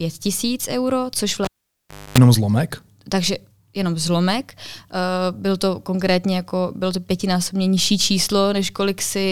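A live cable pulled and plugged in interrupts this speech from 1.45 to 2.18 s: pop, 0.69 s dropout, 0.26 s of 50 Hz mains buzz, then a pop before "zlomek takže jenom zlomek".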